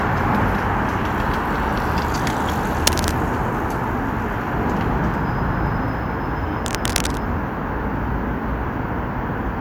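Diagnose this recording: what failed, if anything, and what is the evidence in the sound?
Cable scratch noise appears at 2.87 to 3.17 s and again at 6.64 to 7.18 s: dense, ragged bursts of scratching laid over the sound, the first roughly as loud as the sound itself, the second a little below it. The stage is analogue wiring, and the likely cause is a worn cable, connector or control being moved, so that its contact resistance jumps about rapidly and modulates the signal path with irregular noise for those fractions of a second.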